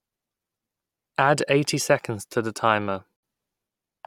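At 3.16 s, a gap at a join of encoded pieces: 69 ms of untrimmed encoder padding, softly edged; speech resumes intact, unlike a dropout.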